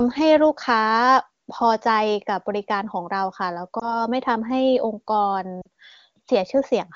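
At 3.79 to 3.97 s the speech briefly dips or warbles, and at 5.61 to 5.67 s it drops toward near silence. These are lost AMR speech frames, which sound like one and then two lost frames. The AMR-WB decoder covered each gap by repeating its last good settings at falling gain.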